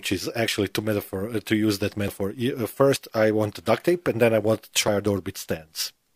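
The speech jumps ahead at 0.48 s, before "to metaphor", then at 2.08 s, at 2.96 s before "I want", at 3.8 s, and at 4.88 s after "and then I want". Each time, roughly 40 ms is gone. The likely cause is a dropped buffer (overrun).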